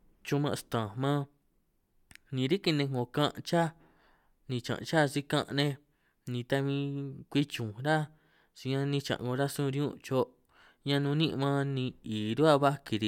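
A speech recording with no technical faults to report. Nothing in it calls for a time or a cause.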